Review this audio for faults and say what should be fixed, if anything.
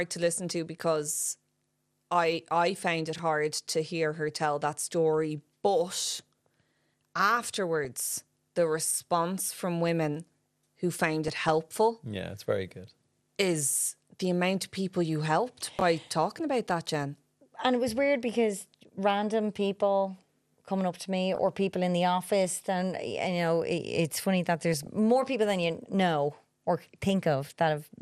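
The speech throughout sounds dull, with a gurgling, granular roughness where upper sub-bands drop out. This is MP2 compression, likely at about 80 kbps. Unlike burbling, it is constant rather than bursty. Prevent it by encoding at a higher bitrate.

Chunks out of order occur at 3.16–3.19 s (between "I I found it" and "hard to hear her"), 8.91–8.95 s (just before "from women who found") and 15.79–15.81 s. In each case, 11.6 ms blocks play one to three blocks late, producing jumbled joins. Nothing is missing, which separates this from dropouts. Prevent it by enforcing sequence order in the buffering.

DAB burbling appears at 4.29 s (between "hard to hear her" and "tell that story"), 7.84–7.85 s, 11.25–11.5 s, 21.35–21.38 s and 24.74–24.87 s. Bit errors of roughly 0.1 to 0.2 percent corrupt samples in single sub-bands, causing short noise blips. Unlike steady codec damage, these come in bursts. 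Prevent it with stronger reception or error protection.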